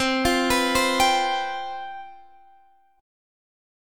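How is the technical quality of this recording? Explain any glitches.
Nothing here trips me up; I can't hear a single glitch anywhere in the recording.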